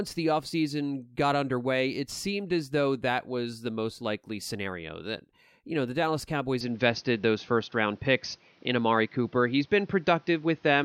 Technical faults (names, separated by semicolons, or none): input switched to a poorer device